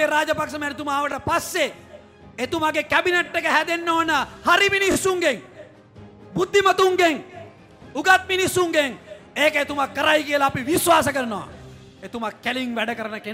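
New audio missed its deadline three times, so the device replayed its last block, which fits a 20 ms buffer. At 1.12–1.14 s and 3.26–3.28 s one block sounds twice; at 4.92–4.96 s it sounds three times. Each repeated buffer gives a brief buzzy stutter with hard joins, and no audio is dropped.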